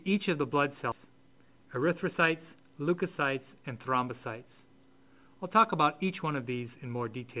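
At 0.92 to 0.94 s around 0.4 s of audio was dropped in a skip ahead, so playback jumps forward with the two sides joined directly and no gap. From 1.52 to 2.14 s a jitter buffer speed-up trimmed roughly 50 ms in short repeated cuts, running the audio at 108% speed, hurried but unchanged in pitch, through a G.711 mu-law path with nothing above 4 kHz.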